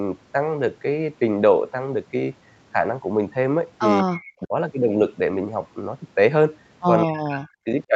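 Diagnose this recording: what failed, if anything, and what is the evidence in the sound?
Speech suppressed in double talk, at 4.03 to 4.10 s, 4.40 to 4.54 s and 7.05 to 7.66 s, belongs to the call-processing stage. The speech dips sharply: by about 25 dB in the first event, about 20 dB in the second, and about 40 dB in the last, which removes roughly half a second. The likely cause is both ends talking at once. The echo canceller could not tell the near talker from returning loudspeaker sound and attenuated everything together.

Echo leak, from 4.14 to 4.33 s, is also a call-processing fault, and it falls between the first two dips. A faint copy of the speech returns 191 ms late, about 20 dB below the direct sound, within the 8 kHz band of the Opus path. This is likely a far-end loudspeaker feeding its microphone, with that end's echo canceller failing to remove all of the pickup, so part of it was sent back.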